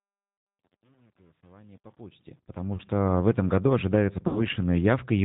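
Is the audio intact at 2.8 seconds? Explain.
No. Between 2.76 and 2.82 s a single VoIP packet, about 30 ms of audio, never arrived, and the decoder covered the gap with packet loss concealment. It stretched its last pitch and filter state forward at falling gain, so the sound is briefly stretched and fades, then stays weak for a moment as the decoder recovers just before "в этом году ожидается". The whole stretch also carries G.729 codec coloring, consistent with 8 kbit/s G.729A: its pulse-based speech model and a ceiling of 4 kHz leave the sound band-limited, slightly rough and synthetic.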